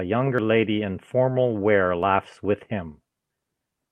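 At 0.38 s and again at 2.03 s the speech lurches forward with no gap, losing roughly 40 ms and then about 20 ms. Both are likely dropped buffers (overrun): samples overwritten before being read, the surrounding audio spliced straight together.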